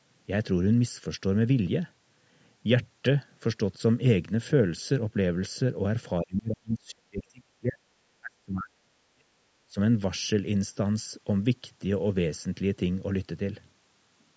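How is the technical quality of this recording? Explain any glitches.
The recording has clear glitches. The speech drops out from 6.2 to 7.81 s and from 8.21 to 9.29 s, then dips more briefly and less deeply from 9.69 to 9.77 s. This is speech suppressed in double talk, likely caused by an echo canceller that could not separate the talker from the overlapping far-end echo and pulled the talker down with it. The audio also went through call microphone processing, which is normal and not a fault, with nothing above 8 kHz.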